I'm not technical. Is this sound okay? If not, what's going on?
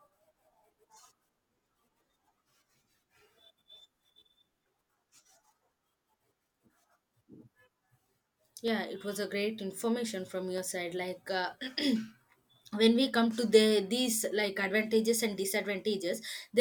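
No. The recording system most likely skipped a few samples, tiny slivers lasting a fraction of a millisecond, in three places. These dropped samples make the speech jump abruptly, heard as a single sharp click at 5.17, 8.68 and 10.58 seconds.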